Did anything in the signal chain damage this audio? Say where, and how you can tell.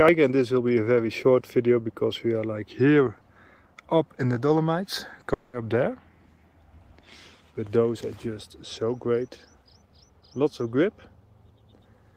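Yes, a long network dropout at 5.33 to 5.55 s. The last sound is stretched into a fading buzz for about 200 ms, with no silence after it, and the audio then resumes with that stretch lost. This is likely packet loss covered by receiver-side concealment.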